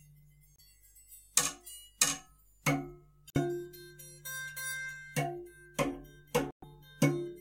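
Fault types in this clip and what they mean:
Bluetooth stall: at 0.56, 3.30 and 6.51 s the music cuts to silence for 25, 48 and 116 ms, each dropout longer than the one before, and then playback resumes. Interference on the wireless link likely held up the audio packets, so the headphones' buffer ran empty and playback stopped until the resent packets arrived. The gaps are hard cuts with no fade.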